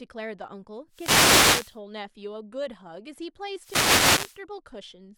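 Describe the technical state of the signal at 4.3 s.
A wireless microphone noise hit runs from 3.56 to 4.41 s and covers 4.3 s. The analogue FM radio link fades as reflected signals cancel, so receiver noise swells over the speech as a burst of static.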